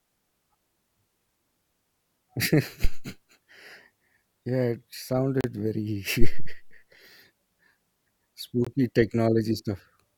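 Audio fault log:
2.84–3.09 s and 6.21–6.62 s, phantom power thump: A deep low thump breaks into the speech. It dies away in about 55 ms the first time and 91 ms the second. A supply switched on a live input sends a voltage step through the coupling capacitors.
5.41–5.44 s and 8.65–8.67 s, Bluetooth stall: The speech drops to silence for 33 ms, then for 21 ms, and resumes each time. The likely cause is interference holding up wireless packets, so the headphone buffer ran dry until resent data arrived.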